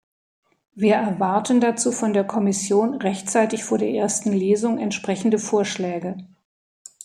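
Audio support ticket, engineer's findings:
No faults found in recording.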